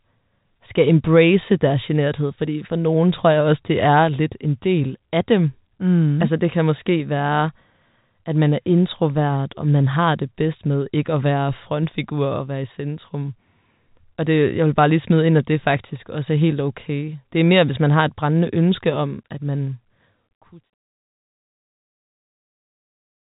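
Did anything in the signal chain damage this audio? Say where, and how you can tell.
No, nothing damaged this audio.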